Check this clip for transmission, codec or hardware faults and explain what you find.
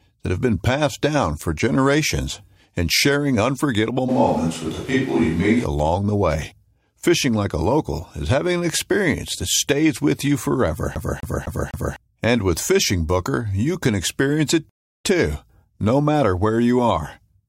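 Three faults turn up in this speech clip.

From 4.10 to 5.63 s, right after "generations and sharing unforgettable", the sound turns roomy and hollow with thinner bass, then snaps back at "the way". That's most likely a switch to a distant microphone. The level barely moves, but room noise sits around 25 dB below the speech.

At 10.95 s, just after "stays with you forever", you get a CD stuck on one turn: the same quarter-second (about 0.25 s) grabs and replays four times, with a tiny mute at each jump. It's the quick, even skip of a laser jumping back, and it clears by 11.96 s.

At 14.69 s, after "you can experience it", there's a rebuffering stall. The player ran dry and went silent for about 0.36 s, then resumed exactly where it stopped with "too no matter where". Nothing's missing, just added dead air.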